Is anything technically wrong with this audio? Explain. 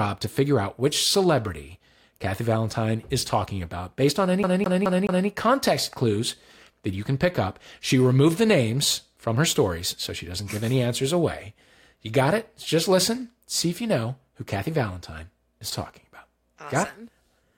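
Yes. CD stuck on one turn, 4.43 to 5.28 s, after "about based on any": the laser jumps back each revolution, replaying a 0.21 s slice four times with short mutes, a fast, even stutter.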